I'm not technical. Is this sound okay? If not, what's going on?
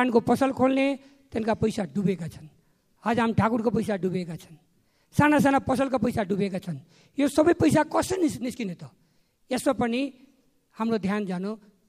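Yes, this sound is okay, and nothing in it points to a technical problem. There are no glitches, dropouts or distortion anywhere in the clip.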